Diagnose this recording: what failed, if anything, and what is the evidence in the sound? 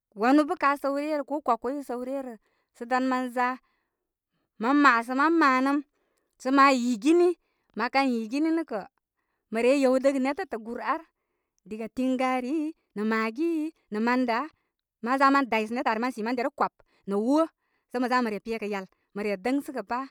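From 12.41 to 19.23 s the speech suddenly runs about 1.38 times faster while pitch holds steady. It sounds rushed. This is a time-stretched section, likely made in software before storage by dropping short slices of audio to shorten it.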